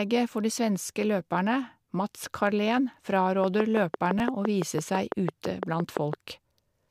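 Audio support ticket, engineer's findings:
Repeated buffer at 0.87 to 0.89 s, right after "for de". Same 10 ms slice plays twice more with hard joins, heard as a brief buzz. Again at 4.19 s, one extra play. Output buffer underrun, so the device replayed its last block. About 20 ms and 10 ms of new audio lost.

Train of clicks from 3.44 to 6.14 s. Regular ticking at about 5.9 per second, around fifteen clicks, similar shape, peaking roughly 15 dB above the signal and audible in pauses. Periodic pulse injection, likely interference from nearby equipment or a faulty connection or power supply.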